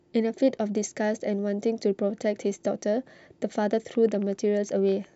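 Likely interference from nearby equipment or a faulty connection injects a train of clicks from 3.73 to 5.05 s: about ten similar pulses at roughly 7.6 per second, unevenly spaced, peaking around the level of the speech, heard as irregular ticking over it.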